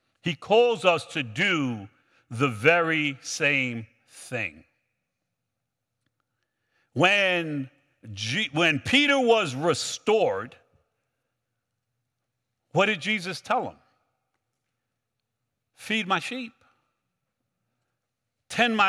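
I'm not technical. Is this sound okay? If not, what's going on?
Yes, nothing wrong can be heard in this speech recording.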